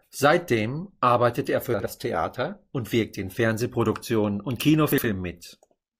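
Chunks out of order in this speech recording: one 60 ms chunk plays a chunk late just after "arbeitet er für" at 1.74–1.86 s and again at 4.92–5.04 s, giving brief jumbled moments.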